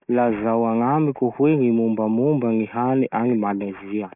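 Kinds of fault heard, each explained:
Aliasing, throughout: the speech was taken down to a much lower sample rate without a low-pass filter first, which fits a drop to a 6 kHz rate. Everything above 3 kHz has nowhere to go, so it mirrors back below that fold point as false, unrelated tones. The sibilants turn gritty and metallic, the spectrum stops abruptly at 3 kHz, and the folded energy sits roughly 30 dB below the speech.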